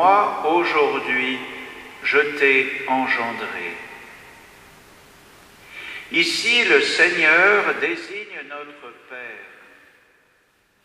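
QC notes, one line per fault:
7.70–8.24 s, zipper noise: the level drops by around 15 dB in unsmoothed 2 dB steps, about fifteen a second, so each jump clicks and the fade ticks audibly.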